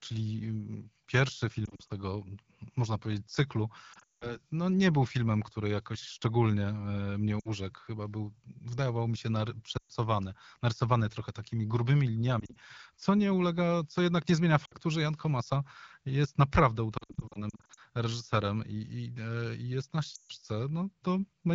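Radio errors corrupted AMR speech frames, so the decoder repeated its last good pitch and vocal tract settings at falling gain. The result is lost AMR speech frames, heard as brief warbles and dips at 1.66–1.93 s, 3.93–4.36 s (one 180 ms run that smears and fades to near silence), 7.39–7.50 s, 9.77–9.92 s, 12.40–12.57 s, 14.66–14.74 s after "co jednak nie zmienia", 16.97–17.80 s between "jest naprawdę" and "reżyserem i i", and 20.15–20.32 s after "i jest na". The surrounding wideband speech sounds clear, which fits AMR-WB at around 12.65 kbit/s.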